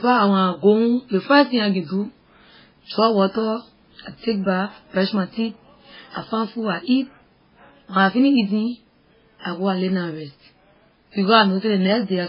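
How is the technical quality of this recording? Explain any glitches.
The quality is poor throughout the speech. The whole recording is band-limited, with nothing above about 5.3 kHz, and carries layered, smeared artefacts. This is likely transcoding between lossy codecs. A very low-bitrate MP3 stage was followed by a WMA stage, and the second codec spent its bits re-encoding the first one's distortion while keeping its cut-off. It sounds muffled and swirly. On a spectrogram there is a hard ceiling at 5.3 kHz with blotchy, patchy energy below it.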